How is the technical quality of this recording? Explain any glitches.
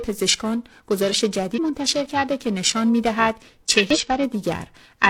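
The recording has two technical problems: a constant tonal roughness and two brief glitches.

Periodic clock jitter runs through the whole clip. Interference is wobbling the converter's sampling clock at around 700 Hz, so every component of the speech gains sidebands spaced about that far above and below it. The result is a rough, metallic edge, strongest on brighter sounds and absent in pauses.

Damaged data in a compressed stream causes the glitches, from 1.54 to 1.59 s and from 3.90 to 3.97 s. Corrupted bytes there made the decoder misread frames, lose sync and hunt for the next valid header. Each spot is heard as a short chirp or blip.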